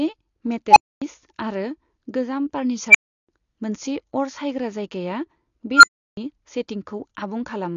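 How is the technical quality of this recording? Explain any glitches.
The technical quality is poor. Plainly audible codec damage runs throughout, and three loud squeals interrupt the speech.

AAC compression: The whole clip sounds dull and smeared, with nothing above 11.6 kHz. This is likely low-bitrate AAC, which discards detail to save data.

Unstable filter: Tones swell, clip and cut to silence at 0.68–1.02 s, 2.90–3.29 s, and after "सायग्रा जायगाया" at 5.75–6.17 s. A recursive filter runs away, overflows and resets. The tones sit around 1 kHz, 2 kHz and 1.5 kHz. Each builds within 43 to 85 ms, and the gaps after them last 256 to 341 ms.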